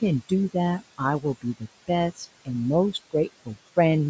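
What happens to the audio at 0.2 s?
Noise suppressor artifacts are present at 0.2 s, as they are throughout the speech clip. The suppressor judges, frame by frame, which frequency bands hold only steady room noise and pulls those down, here by about 21 dB. The room noise sits only about 16 dB below the speech. Noise sinks away in the gaps and returns under the speech, all within a band that stops at 8 kHz from the call's microphone processing.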